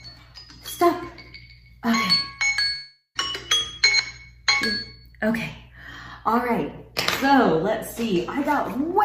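At 2.75 s the audio breaks off and does not properly return until about 3.17 s, the sign of a long network dropout, likely caused by packets failing to arrive. For most of that gap, roughly 400 ms, the receiver fills in by extending the last sound as a fading buzz or hiss, and the final 140 ms or so settles into silence. When the signal resumes, the lost portion is simply absent rather than delayed.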